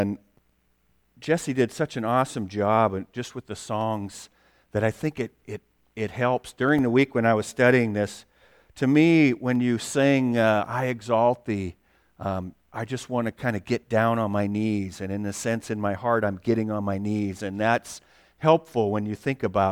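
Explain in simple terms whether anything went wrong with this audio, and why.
A click repeats every 2.88 seconds in the speech, from 0.94 s to 18.18 s. This is clock drift buffer slips, likely from two devices whose clocks differ by around 50 parts per million, so a handful of samples periodically gets dropped or repeated.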